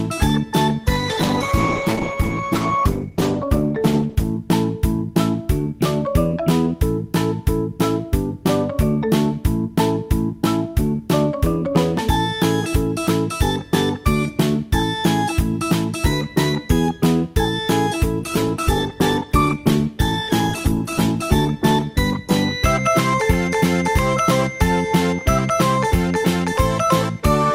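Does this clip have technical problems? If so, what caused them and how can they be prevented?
Yes. From 0.84 to 4.31 s and again from 18.18 to 23.23 s the sound turns rough and muffled, consistent with a call bitrate drop to roughly 13 and 16 kbps. The encoder coded coarsely and trimmed high frequencies for about 3 s each time. Smoothing bandwidth estimation and setting a higher minimum bitrate would prevent it.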